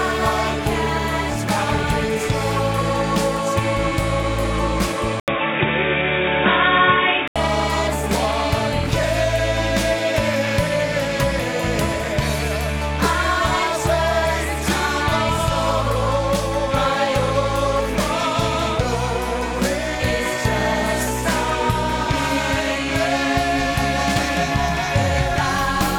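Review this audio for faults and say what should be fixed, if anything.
From 5.20 s to 7.36 s the sound turns dull and boxy, with nothing above 3.8 kHz, after a brief 80 ms gap. The level also shifts by roughly 5 dB, and a faint new background noise appears. This is likely an input switched to a poorer device mid-recording. To prevent it, lock the recording input to a single device and disable automatic switching to headsets or call profiles.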